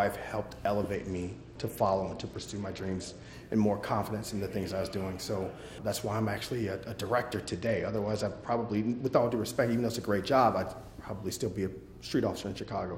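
From 0.95 to 3.33 s, 7.44 to 9.19 s and 12.63 s to the end, a Bluetooth SBC bit pool drop starves the top sub-bands and coarsens the rest. The treble dulls and grit appears. On a spectrogram the upper bands go blank or blotchy. This fits a bit pool cut from 31 to 10, near 77 kbps.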